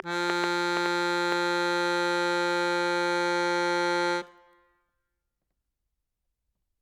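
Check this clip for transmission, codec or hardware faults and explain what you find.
One fault is present in this music clip: a train of clicks from the very start to 1.33 s. About seven sharp, near-identical pulses arrive at an uneven pace of roughly 3.8 per second, standing well above the music. The likely cause is an external pulse source, such as interference from nearby equipment or a faulty connection, briefly injecting spikes. Because the clicks repeat with a consistent shape, this is a train rather than a single isolated pop or random crackle.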